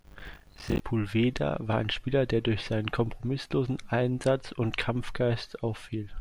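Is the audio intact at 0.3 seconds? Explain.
No. From 0.0 to 0.8 s the speech suffers buffer tearing: writer and hardware reader have slipped inside the ring buffer, so a bit under half of each period replays audio around 40 ms old, with hard joins giving a robotic 50 Hz rattle.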